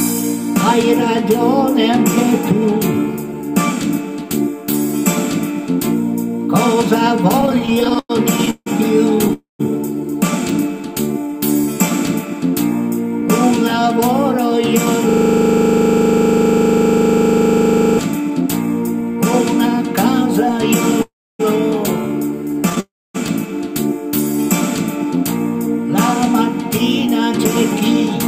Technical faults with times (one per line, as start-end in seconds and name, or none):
7.41-9.31 repeated stalls (stutter)
9.33-9.61 call audio freeze
11.02-11.40 jitter buffer slow-down
13.22-14.54 jitter buffer speed-up
15.09-17.99 system hang loop
21.02-21.41 call audio freeze
22.60-22.78 repeated stalls (stutter)
22.80-23.16 call audio freeze
25.04-27.48 jitter buffer speed-up